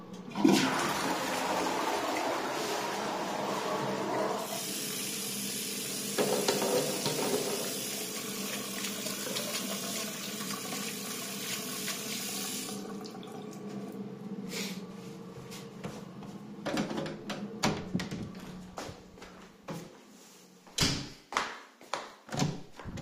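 Nothing technical goes wrong anywhere in this recording of sounds, so there's nothing here to pick out.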